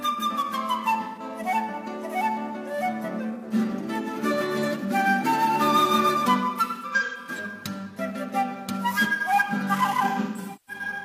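Smeared, noisy patches appear at 1.03–1.23 s and 3.34–3.45 s, then in scattered clusters over 6.67–7.30 s and 10.08–10.82 s, with runs up to about 150 ms. This is AAC frame loss with concealment: the decoder patches missing frames from the last good spectrum.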